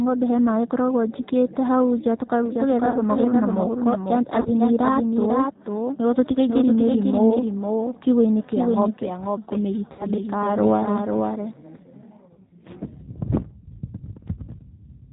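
Throughout, the speech carries the plainly audible damage of the G.729 codec at 8 kbit/s. Everything above 4 kHz is gone, and the sound is rebuilt from a vocal tract filter and a handful of pulses per frame, which gives a rough, slightly synthetic texture.

Concealed VoIP packet loss interrupts the speech at 2.90 to 2.98 s, 4.41 to 4.49 s and 9.93 to 10.08 s. The first two each cover 40 ms of missing audio, consistent with two lost packets. The third covers 60 ms, pointing to three lost packets. In each gap the decoder stretches the last pitch and filter into a fading buzzy tone or coloured noise. The following speech returns weak or distorted while the decoder's state recovers.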